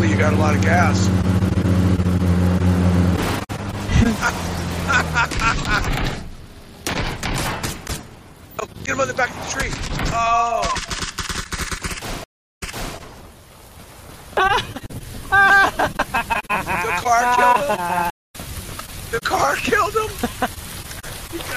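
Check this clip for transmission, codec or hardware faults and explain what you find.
Two stream reconnect dropouts. At 12.24 to 12.95 s the connection breaks, about 323 ms of silence, then a fresh decoder resumes 392 ms earlier, so you hear a repeat. At 18.10 to 18.36 s there's a 186 ms gap, and it picks up around 150 ms later, skipping a bit.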